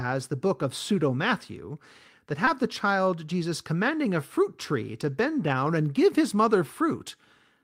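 At 2.45 to 2.49 s, just before "the child", there is a short concealed packet loss. Audio arrived too late for the decoder, which extended the preceding sound for about 12 ms to cover the hole before blending back. It is heard as a brief smear leading into the phrase.

Overlapping the end of that gap, 2.47 to 2.49 s, is a lost packet rebuilt from error correction. A 20 ms frame was replaced by the low-bitrate copy carried in the following packet, so nothing drops out, but the sound turns momentarily rougher and noisier. The same fault recurs at 5.29 to 5.31 s, between "a fruit tree to" and "down and give his", as another 20 ms grainy patch.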